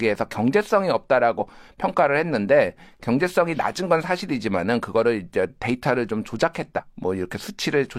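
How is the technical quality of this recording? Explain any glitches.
The recording has two short glitches in the speech, both from damaged data in a compressed stream. The first runs from 1.35 to 1.39 s and the second from 6.74 to 6.80 s. Each is a brief chirp, squawk, click or short hole lasting a few tens of milliseconds that cuts across the speech. The cause is corrupted bytes in the encoded file at those points. The decoder misreads the affected frames and loses sync, producing garbled output until it locks onto the next valid frame header.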